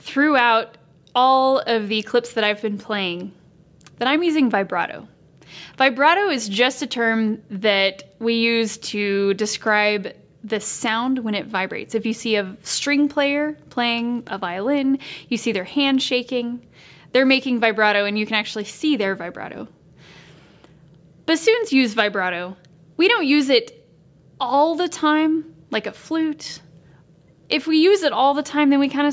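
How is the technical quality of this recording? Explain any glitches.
No technical faults are audible.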